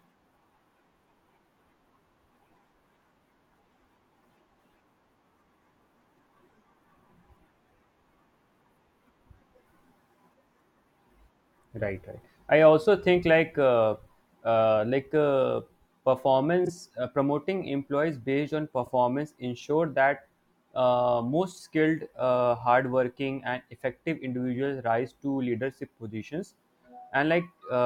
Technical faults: frames out of order

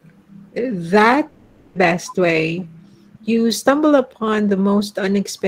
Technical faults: long network dropout

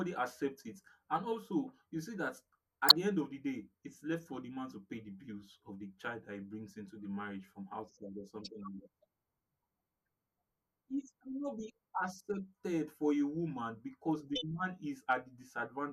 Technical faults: corrupt frame decoded

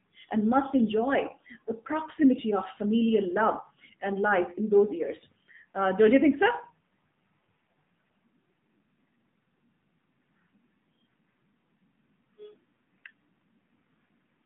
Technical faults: AMR narrowband mobile codec

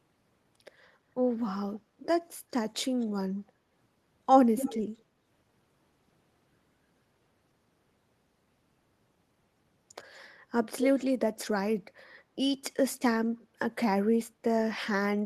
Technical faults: echo leak

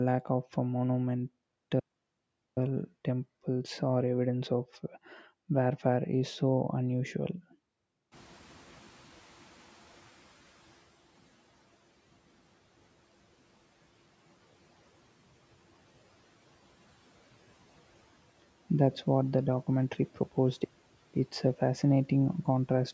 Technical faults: playback stall; noise suppressor catching up

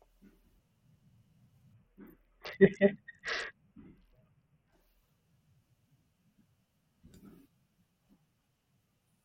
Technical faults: Bluetooth SBC bit pool drop

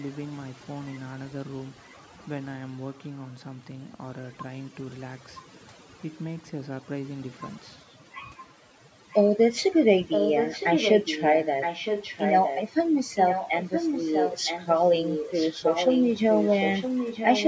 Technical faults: overdone noise removal; echo leak

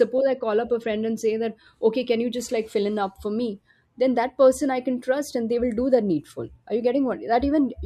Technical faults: none

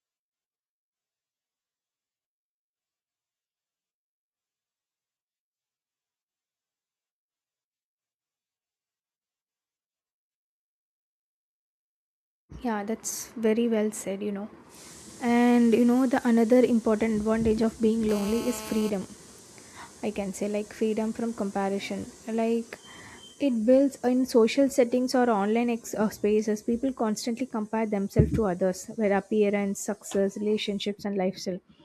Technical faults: GSM phone buzz

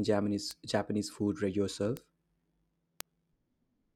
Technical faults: bit error spike

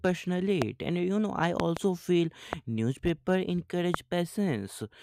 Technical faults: loud pop

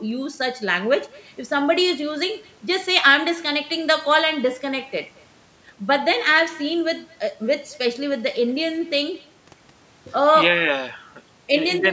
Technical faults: echo with no canceller

